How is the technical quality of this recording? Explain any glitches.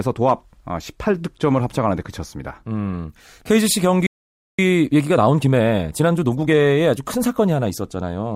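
Two linked glitches affect the speech. From 4.06 to 4.59 s there is a playback stall: the audio drops to silence for about 0.52 s mid-flow, likely because the player ran short of data or its thread was blocked. From 4.59 to 6.67 s a time-compressed catch-up follows. The player cuts and cross-fades small segments to clear its backlog, so the speech runs about 1.25 times fast at normal pitch.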